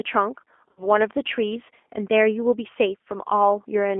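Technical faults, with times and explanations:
Throughout: G.729 codec. The speech has passed through an 8 kbit/s G.729A coder on a telephone line limited to about 250 Hz to 3.4 kHz, so nothing above that band survives, and rebuilding each frame from a filter, pitch predictor and a few pulses leaves the voice plainly rough and synthetic.
0.71 to 0.86 s: VoIP packet loss concealed by the speech codec. About 60 ms of audio went missing, which points to three lost packets. The decoder repeated its last pitch and filter at falling gain, stretching the sound as it fades, and it stays weak briefly after packets resume.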